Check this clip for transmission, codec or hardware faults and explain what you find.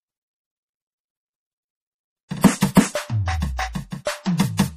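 Two codec faults are present in this music clip. Throughout, the audio sounds watery and swirly, with nothing above 15.2 kHz, likely MP3 compression at a low bitrate of around 40 kbps that cuts the treble and drops weaker frequency detail. Pre-echo appears at 2.42–2.44 s, 2.74–2.77 s and 4.38–4.40 s, where a short hiss of 20–26 ms precedes each attack. The codec spread its noise across the whole block, softening the hit.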